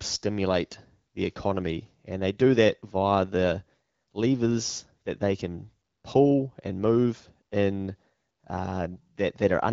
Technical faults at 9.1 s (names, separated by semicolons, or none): none